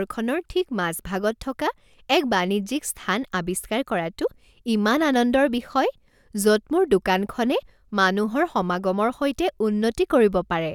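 No technical faults can be heard anywhere in this recording.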